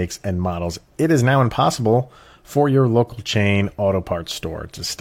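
No technical faults are audible.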